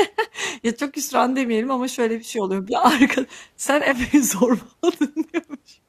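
A speech clip with a brief glitch from 3.90 to 3.93 s, caused by damaged data in the compressed stream: corrupted bytes made the decoder misread those frames and lose sync.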